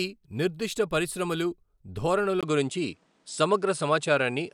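At 2.41 s the speech briefly drops out for about 20 ms, then comes back sounding different until the end. From there nothing reaches above 10.5 kHz, so the top end goes dull, the level shifts by around 5 dB, and a new noise floor shows up roughly 40 dB below the speech. That's most likely the input switched to a poorer device partway through: another mic, or a headset dropping into its narrower call mode.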